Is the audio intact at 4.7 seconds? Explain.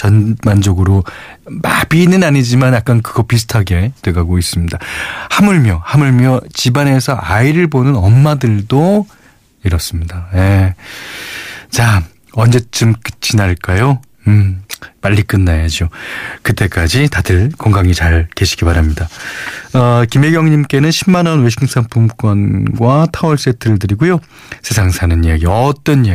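No, 4.7 seconds falls inside hard clipping that runs through the whole speech clip. The level is pushed about 3 dB past what the chain can carry, so the loudest peaks get sliced flat, though only a small share of the signal, maybe one or two percent, actually hits the ceiling. Those squared-off tops throw harmonics high up the spectrum, which you hear as a gritty crackle riding the louder syllables rather than a constant fuzz.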